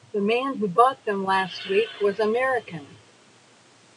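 No technical faults can be heard in this speech clip. The room noise sits about 34 dB below the speech, a part of the recording rather than a fault of the system.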